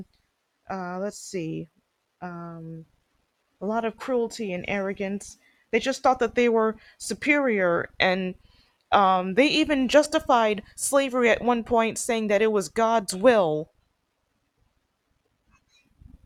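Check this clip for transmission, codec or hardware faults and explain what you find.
Two brief dropouts from lost LE Audio frames occur in this speech clip. Light lossy compression is also present.

Lost LE Audio frames occur at 4.37 s (about 7.5 ms, which fits a single LC3 frame) and from 10.04 to 10.06 s (about 15 ms, pointing to two frames). The decoder filled each gap by repeating the previous spectrum with scrambled signs, producing a short, noisy smear in the sound.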